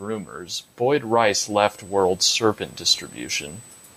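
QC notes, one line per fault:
Throughout: USB whine. A steady, fixed-pitch tone sits at 8 kHz, roughly 25 dB below the speech. That frequency matches the 125-microsecond microframe rate of a USB bus, whose current draw is leaking into the audio path through shared power or ground.
0.05–3.54 s: automatic gain rising. Speech and background noise swell together by about 9 dB over roughly three and a half seconds. The automatic gain control judged the input too quiet and raised its gain gradually, so everything in the signal grows at once.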